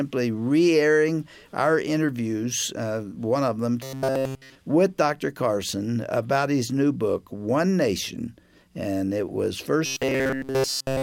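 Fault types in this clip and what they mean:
Robotic sound from repeated short buffers: Twice, from 3.83 to 4.55 s and again from 9.86 s to the end, the audio collapses into a stiff, metallic buzz pitched at 133 Hz. That pitch points to a chunk of about 7.5 ms being looped over and over. Essentially everything in those stretches is repetition, likely because fresh audio wasn't arriving in time, so the real material was skipped and the last short buffer got replayed.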